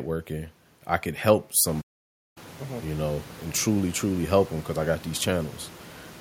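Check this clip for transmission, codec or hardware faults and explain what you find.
One fault stands out, a playback stall in the speech. At 1.81 s, right after "I could help", the sound cuts to silence mid-flow and stays dead for about 0.55 s, resuming at 2.38 s. This is most likely a stall in the player: its buffer ran dry or its output thread was held up, so nothing reached the output until data flowed again. The room noise that rises by about 17 dB from around 1.5 s, sitting about 21 dB below the speech, is part of the recording rather than a transmission fault.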